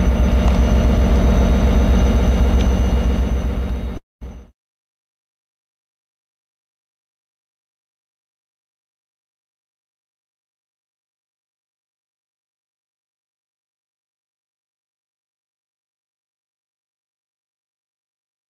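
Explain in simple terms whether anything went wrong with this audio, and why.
At about 3.97 seconds the sound breaks off for roughly a quarter of a second, until about 4.23 seconds. This is a long network dropout, and the likely cause is that the audio stopped arriving over the connection. The player stretches the last bit of sound into a fading buzz, then nearly 0.2 seconds of silence follows. When the audio returns, that missing piece is simply gone. A brief glitch would be a quick click or stutter. This is a fade into a real gap.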